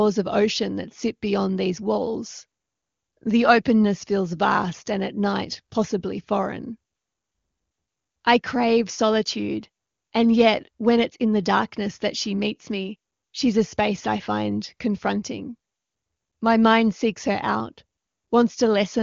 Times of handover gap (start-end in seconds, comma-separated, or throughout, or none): none